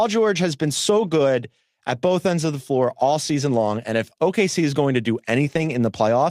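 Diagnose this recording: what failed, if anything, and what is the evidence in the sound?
Network stage: lost packets rebuilt from error correction at 1.03–1.09 s and 5.45–5.75 s. Low-bitrate copies fill each gap, so the speech turns rougher and noisier without dropping out.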